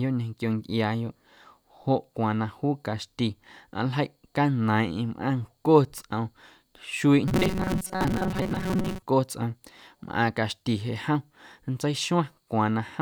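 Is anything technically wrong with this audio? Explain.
Yes. From 7.28 to 9.08 s the speech turns into robotic sound from repeated short buffers, a rigid metallic buzz at 188 Hz that still loosely tracks the speech. The likely cause is audio arriving too seldom, with roughly half the time filled by looping the last 5.3 ms chunk. Unlike codec warble, the buzz stays at one fixed rate.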